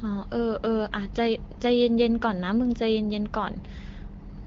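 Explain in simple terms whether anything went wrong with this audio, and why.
Nothing went wrong here: the speech has come through an ordinary HD Voice phone-call codec (AMR wideband) that is doing its job, and nothing in the recording stands out as a problem.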